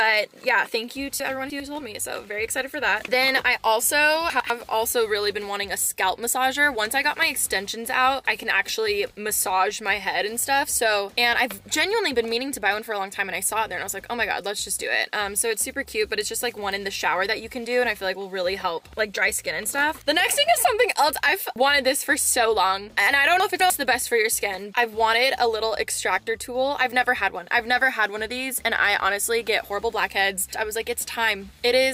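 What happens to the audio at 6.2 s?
Nothing goes wrong at 6.2 s; the audio runs on cleanly through that moment without any dropout, click, glitch or other fault.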